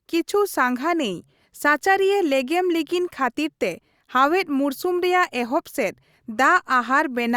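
No technical faults can be heard anywhere here.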